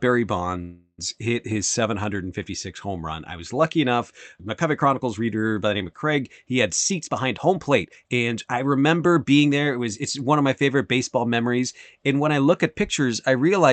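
A call audio freeze runs from 0.61 to 1.01 s. The last sound is drawn out as a fading buzz or hiss for about 0.37 s, with a brief silence at the end, and then the speech resumes where it stopped with nothing lost. The likely cause is delayed packets emptying the jitter buffer.

A jitter buffer speed-up runs from 6.91 to 9.49 s. The receiver trims short pitch-period slices over and over to shed the backlog, removing roughly 0.4 s in total. The speech plays at about 114% speed without any change in pitch and sounds hurried. This happens on an Opus call path at 40 kbps whose audio stops near 8 kHz.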